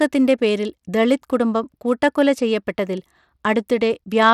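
Throughout, the speech carries plainly audible coding damage, likely from Bluetooth SBC compression at a setting that fits about 96 kbps. The upper sub-bands are starved of bits, so nothing survives above 17 kHz, and coarse quantisation leaves a gritty edge on the remaining treble.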